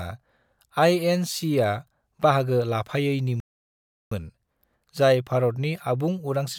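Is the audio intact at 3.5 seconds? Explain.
No, at 3.5 seconds the speech has dropped into a playback stall. The output goes silent from about 3.40 s to 4.11 s, a gap of roughly 0.71 s, cutting the sound off mid-flow before it picks up again. The likely cause is the player running dry of data or having its thread blocked, so nothing reaches the output until it recovers, which is why you get dead air rather than a glitch or noise.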